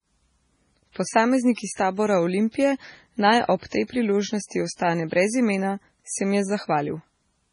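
Speech with heavy MP3 compression throughout, likely from a very low bitrate around 24 kbps: nothing above 10.5 kHz, and a watery, swirling texture with chirpy s sounds. Unlike a plain low-pass filter, the weak frequency lines flicker on and off between frames.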